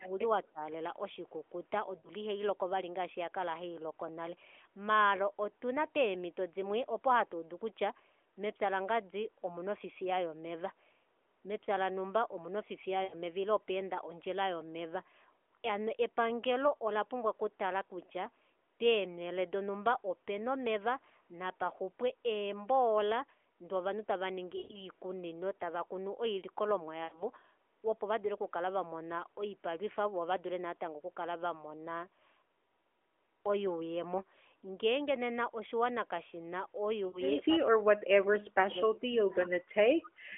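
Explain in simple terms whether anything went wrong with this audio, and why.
Yes, a few things went wrong. Right at the start, 0.0 to 0.21 s and 0.51 to 0.61 s, the sound briefly dips down. From 37.46 to 39.6 s and again from 39.98 s to the end, it nearly disappears. This is speech suppressed in double talk. The likely cause is that both ends spoke at once, and the phone's echo control turned the talker down along with the echo.

Five brief hiccups, each shorter than an eighth of a second, come at 1.98, 13.04, 24.58, 27.04 and 37.08 s. Each is a short smear or warble. These are lost AMR speech frames. Radio errors damaged a few tiny chunks of the mobile signal, and the decoder filled the gaps by stretching out the last good sound as it faded.

Around 39.44 s a faint, short repeat of the voice can be heard, about a quarter of a second late. This is an echo leak. The likely cause is that a speakerphone's microphone caught the loudspeaker and sent a weak copy back down the line.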